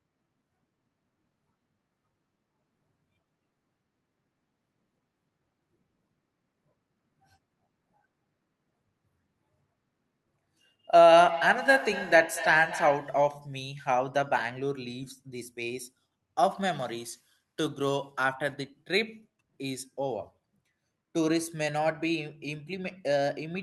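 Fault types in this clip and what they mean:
Feedback echo between two devices: the speech returns in thin, ringing repeats roughly a fifth of a second apart, peaking about 9 dB below the direct sound, because a second device in the room replays the call into the first microphone, beyond its echo canceller's reach.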